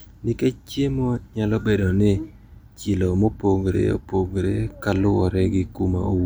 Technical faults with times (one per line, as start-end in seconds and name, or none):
none